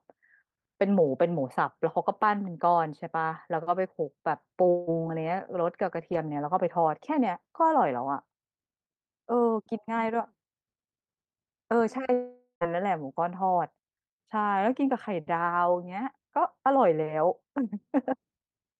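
Around 4.69 s the speech gives way to a smeared, buzzy continuation for about 0.2 s, then picks up at 4.90 s with roughly 180 ms simply gone. At 12.13 s it happens again, longer: about half a second of the last sound stretched into a fading hiss, ending in roughly 80 ms of silence before the audio returns at 12.64 s. Both are likely long network dropouts, with the receiver papering over the missing audio.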